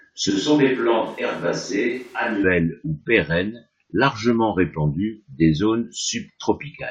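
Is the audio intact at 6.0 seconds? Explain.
Yes, at 6.0 seconds the speech runs intact, with no fault audible at that moment.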